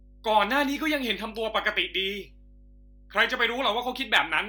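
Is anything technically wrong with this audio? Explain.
Yes, there is mains hum running through the whole speech clip: a steady 50 Hz tone sitting roughly 25 dB below the speech, from power-line current leaking into the signal path through a ground loop or nearby transformer. A spectrogram shows a constant horizontal line at 50 Hz with some low harmonics, and the waveform shows a smooth 20 ms ripple in the pauses.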